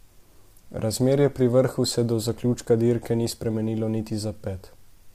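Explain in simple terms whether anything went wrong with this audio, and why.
Something did go wrong, and it lasts the whole clip. The speech sounds rough and grainy from start to finish. There is a hiss between the tones of the voice, and the top end sounds dull or artificial. This is likely low-delay AAC compression, the kind used on video calls. It cuts the audio into very short slices so the delay stays small. Too few bits are left to describe each slice, so the sound comes out coarse.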